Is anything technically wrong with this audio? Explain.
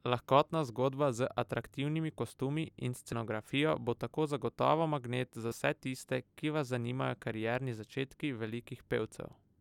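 Yes, there are compressed frames skipped, three times in this speech. Around 1.60 to 1.63 s roughly 20 ms of audio vanishes, at 3.11 s around 70 ms goes, and right after "tako zagotovo magnet za" at 5.50 to 5.53 s about 50 ms drops out. Whole coded frames never got played, so the sound jumps forward.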